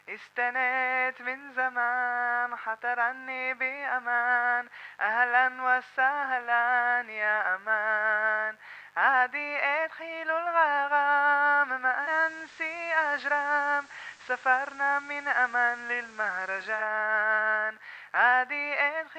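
Right from the start and all the way through there's a mains buzz sitting underneath, built on 50 Hz and roughly 40 dB down from the programme. It isn't a smooth hum. It has that raspy edge you get when something like a dimmer or rectifier spikes twice per mains cycle, pushing harmonics well up into the kilohertz range. It stays steady the whole time.

At 11.93 s you can hear digital radio blending to analogue. The receiver loses the digital stream and cross-fades, over about 223 ms, to the station's FM broadcast. The level doesn't change. A layer of FM hiss comes up, roughly 30 dB below the sound. At 16.92 s it blends back to digital, and the clean background returns.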